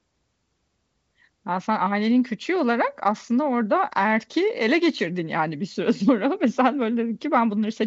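Speech, with no technical faults to report.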